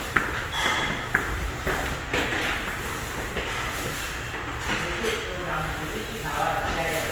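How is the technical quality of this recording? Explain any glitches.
The recording carries plainly audible codec damage from start to finish. Opus compression is the likely cause. Across the whole clip, tonal parts turn rough, grainy and noisy rather than swirling or bubbly as with MP3. The bandwidth stays full, up to about 20.2 kHz, which fits a low-bitrate music-mode encode near 24 kbps that fills starved bands with noise instead of leaving holes.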